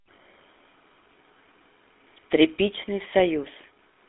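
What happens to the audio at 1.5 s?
At 1.5 s you're hearing the GSM full-rate codec, which runs through the whole clip. It rebuilds speech from a vocal-tract model driven by pulses, clipping the band to roughly 200 Hz–3.6 kHz, so it sounds plainly buzzy and gravelly.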